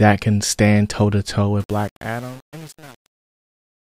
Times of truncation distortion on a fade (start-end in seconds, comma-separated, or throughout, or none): 1.60-3.99